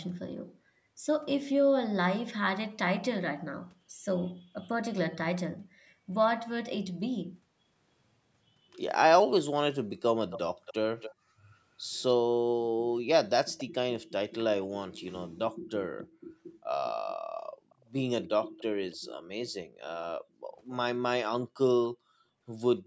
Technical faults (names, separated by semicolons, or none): background gated by the echo canceller; echo leak